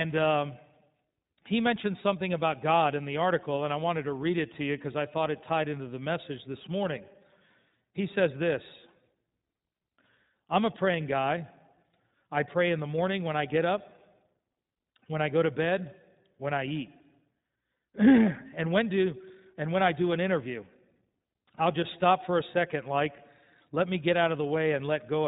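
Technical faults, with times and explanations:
Throughout, iLBC codec: the speech is intelligible but plainly rough and faintly synthetic, and the whole clip sounds boxed in, with nothing above about 3.8 kHz, so sibilants and breath detail are dulled. This narrowband voice codec rebuilds each short block of sound from a compact model of its excitation, coding each block independently of the one before. The grainy texture fits 20 ms frames at a rate near 15.2 kbps.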